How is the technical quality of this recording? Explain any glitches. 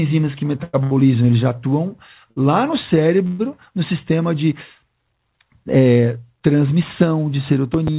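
The recording carries four distinct glitches. It comes through a call path and sounds narrowband, with nothing above 4 kHz, which points to G.711 A-law at 64 kbps.

Repeated stalls (stutter) run from 0.58 to 0.93 s. Packets arrived late or too slowly for playback. The jitter buffer ran dry four times. Each time, the receiver kept the last sound going until data returned. About 188 ms was filled this way, over half that span. The longest wait was 100 ms. Nothing is lost. The speech drags and stutters through this stretch.

A short stall from a late packet occurs from 2.31 to 2.38 s. One packet was not there when due, and the buffer emptied. The receiver stretched the last sound for about 53 ms. Then the packet arrived and playback resumed from the same point. No speech is missing. A sound is simply held too long, with a slight buzz or dip.

A call audio freeze spans 3.27 to 3.41 s. The audio halts, and the last sound is carried on as a fading buzz or hiss for about 123 ms. 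It never drops to full silence. Speech then resumes where it stopped, so a gap has been inserted and nothing is lost. The likely cause is packets held up in transit, which emptied the jitter buffer.

A loud pop appears from 7.74 to 7.90 s. Two sharp pops sound in quick succession, roughly 10 dB above the speech. The speech continues underneath them. Downstream circuits shape each pulse into a sharp click or thump. The likely cause is a sudden voltage step or pulse from a plug, switch, static discharge or driver glitch.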